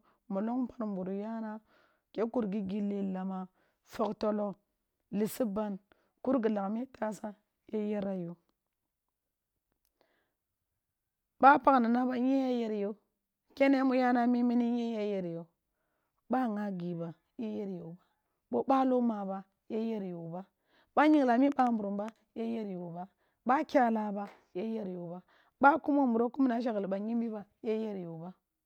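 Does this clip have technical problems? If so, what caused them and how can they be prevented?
Yes. From 21.14 to 22.10 s a train of clicks ticks over the speech, roughly five sharp pops at about 4.2 per second with uneven spacing, peaking a few dB above the speech. Likely cause: electrical interference or a faulty connection or power supply. Prevent it with stable, shielded connections and distance from noisy equipment.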